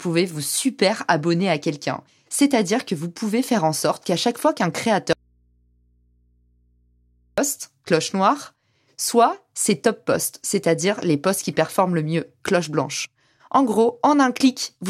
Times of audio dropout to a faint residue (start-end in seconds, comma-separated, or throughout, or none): 5.13-7.38